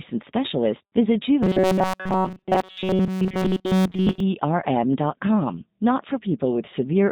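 Throughout the clip the speech carries the character of the G.729 codec, with damage that is plainly audible. Nothing above 4 kHz comes through, and voices sound slightly rough and synthetic because each 10 ms frame is rebuilt from a vocal tract model, a pitch predictor and a sparse set of pulses rather than from the original waveform. The texture fits an 8 kbit/s G.729A stream.

From 1.43 s to 4.20 s the speech turns into a rigid, metallic buzz pitched at 188 Hz that still loosely tracks the syllables. This is robotic sound from repeated short buffers, likely caused by new audio arriving too slowly, so the playback fills the gaps by looping the last fragment. A loop period of about 5.3 ms sets that fixed pitch, and most of the audio in this stretch is repeated material rather than real signal.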